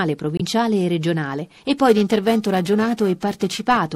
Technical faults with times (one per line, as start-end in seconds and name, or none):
0.37-0.41 corrupt frame decoded
1.88-3.77 periodic clock jitter